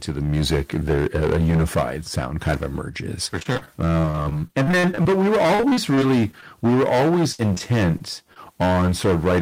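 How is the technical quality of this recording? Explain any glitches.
Technical quality is poor: the speech is heavily overloaded from start to finish, and two stretches break up into choppy sound with pieces missing.

Hard clipping runs throughout. The level is driven about 18 dB past the limit, so roughly a fifth of samples are cut flat. This gives constant harsh fuzz rather than occasional peak crackle.

Repeated packet loss (robotic sound) occurs from 3.39 to 6.44 s and again from 7.32 to 8.38 s. Many short holes, up to 43 ms and then 62 ms long, are patched by stretching the previous sound. Unlike clipping, this makes the audio choppy in bursts.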